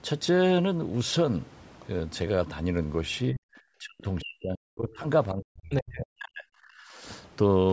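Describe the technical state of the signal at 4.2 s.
Speech suppressed in double talk covers 4.2 s, within a stretch from 3.79 to 5.06 s. The speech is turned down, falling by something like 40 dB at its deepest, with about a second affected in total. The likely cause is an echo canceller facing two people talking at once: unable to tell this talker from the returning loudspeaker echo, it attenuated both. The 8 kHz call bandwidth is normal call processing, not a fault.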